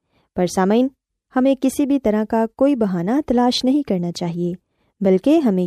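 Nothing technically wrong turns up in this short bit of speech; there's no fault to point to anywhere in it.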